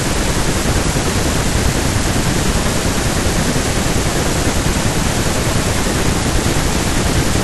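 Listening carefully to the speech, nothing stood out as a technical problem at any point.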